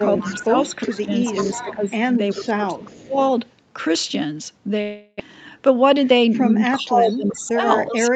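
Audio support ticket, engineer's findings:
Speech suppressed in double talk, 0.0–1.1 s, 1.64–3.19 s, 6.73–8.15 s. Near-end speech ducks by about 15 dB in the first two spans, about 20 dB in the last. Likely cause: the echo canceller failing to separate local talker from loudspeaker echo during simultaneous speech, so it attenuates both. Far-end echo suppressor/AEC double-talk detection.

Echo leak, 0.17–1.75 s, 2.3–3.02 s, 7.1–7.96 s. Delayed copy of the talker trailing by 383 ms, at about 15 dB below speech, then about 25 dB below, then about 10 dB below in the last span. Likely cause: residual echo on the loudspeaker side not fully cancelled and returned in the call. Remote AEC.

Long network dropout, 4.81–5.22 s. About 400 ms of audio missing; receiver continues the last sound for roughly 380 ms as a fading buzz rather than going silent, then resumes further on with the gap's content lost. 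Likely cause: a burst of packet loss on the network path, concealed by the decoder. Jitter buffer/PLC.

Jitter buffer slow-down, 5.26–5.58 s, right after the dropout. Playback stretched to 90% speed at unchanged pitch, 37 ms added, sounds drawn out. Receiver repeating pitch periods to rebuild its reserve after the underrun. Jitter buffer time-stretch.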